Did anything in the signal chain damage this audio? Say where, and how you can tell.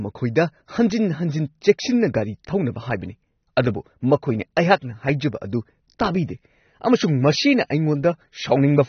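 Yes, at the codec stage, throughout the speech: nothing above 6.3 kHz and plainly audible smearing, which fits AAC compression at a low bitrate around 24 kbps, likely AAC-LC. Unlike a clean low-pass filter, the quantisation damage sits inside the remaining band too.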